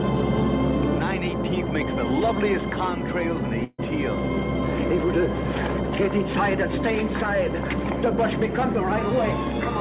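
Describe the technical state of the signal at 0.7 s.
At 0.7 s the signal is intact, with only the steady band-limiting of the call path, which has nothing above 4 kHz, consistent with G.711 mu-law at 64 kbps.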